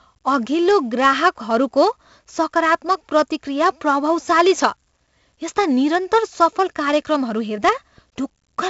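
The whole thing runs through 4-bit ADPCM compression, and it's heavy. Each sample is coded as a coarse step off a prediction, so a gritty hiss rides every loud syllable and sharp attacks smear. Nothing reaches past 7.7 kHz, which fits a 64 kbps stream at 16 kHz sampling.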